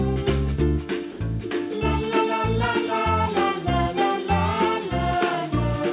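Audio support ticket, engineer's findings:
Sound dropped by the voice detector, 1.12 to 1.20 s: 80 ms of sound replaced by steady comfort noise, then sound resumes. Likely cause: sender's voice detector misclassifying a quiet stretch as background, muting transmission; receiver filling the gap with generated noise until detection re-triggers. Call path audible as band-limited at 4 kHz, consistent with G.711 mu-law at 64 kbps.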